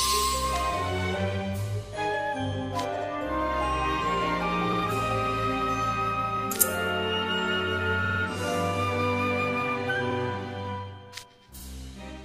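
Short runs of compressed frames were delivered more than once, so the decoder replays the same slice of sound, a repeated-frames fault. Stutters start at 2.97 s and 4.72 s (78 ms each), 6.36 s (26 ms), 8.04 s, where a 52 ms block plays three extra times and adds 157 ms, then 10.10 s and 11.59 s (52 ms each). Each repeat is heard as a brief skip-back, and the audio runs longer by each repeated span.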